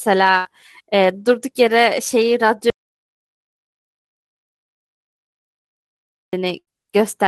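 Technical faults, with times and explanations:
0.37–0.47 s and 6.59–6.69 s, burst of packet loss: each time about 80 ms of audio never arrives, and the receiver extends the preceding sound for roughly 75–80 ms, fading it into a held buzz or hiss before resuming further on. The gap is filled with a decaying copy, not silence.
2.70–6.33 s, audio dropout to silence: the sound cuts off abruptly and about 3.6 s of silence follows, with no room tone, before audio returns mid-flow, likely from a lost input or link. Unlike packet loss, nothing fades or buzzes into the gap.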